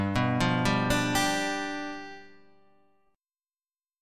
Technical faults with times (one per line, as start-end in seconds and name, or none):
none